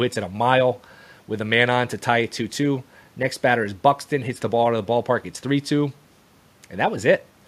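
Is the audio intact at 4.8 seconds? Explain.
Yes, the speech at 4.8 seconds is intact, with no dropout, click, distortion or other fault audible at that point.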